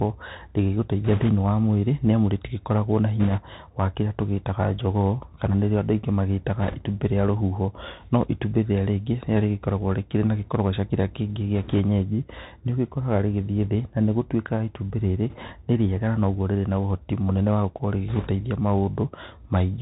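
Bluetooth CVSD headset codec runs through the whole speech clip: the one-bit delta coder passes nothing above 4 kHz, lags on loud high sounds, roughens s sounds and leaves granular hiss underneath. Bit errors on a Bluetooth voice link bring brief rushing crackle at 1.04–1.29, 3.20–3.42, 6.62–6.76, 11.55–11.79, 15.30–15.52 and 18.08–18.29 s. These are bursts of a few percent flipped bits whose small, quickly fading effects smear into noise rather than loud clicks.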